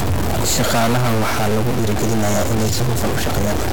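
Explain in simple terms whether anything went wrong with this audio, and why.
Two things went wrong. The first is most likely a stuck bit: one bit in the digital data, probably from a faulty connection or converter, never changes. Throughout the recording the speech carries added distortion, and even the quiet gaps between sounds are filled with noise.

The second is a time-stretched section, most likely from software squeezing the audio to fit a shorter length. From 1.51 s to the end, the speech suddenly runs about 1.35 times faster while keeping its normal pitch, so it sounds rushed.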